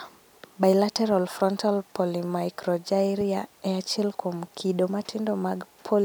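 No technical faults can be heard in this speech recording. No moment stands out as a problem in how the audio was captured or delivered.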